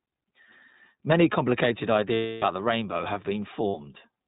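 Throughout, the speech carries plainly audible iLBC codec damage. A slightly rough, synthetic texture fits 20 ms frames at about 15.2 kbps, each coded independently. On a spectrogram, energy stops sharply at 4 kHz, leaving the upper band empty.

From 2.14 to 2.44 s, just before "the rainbow have", lost iLBC frames leave about 280 ms that the decoder fills by repeating the last pitch cycle mixed with noise, fading as it goes. It sounds like a held, buzzy vowel. A spectrogram shows flat, unchanging harmonic stripes there, and the waveform shows a repeating cycle shrinking in amplitude. A second, 60 ms loss at 3.68 to 3.76 s, right after "the rainbow have", gives a brief buzzy hold, and the speech recovers almost at once.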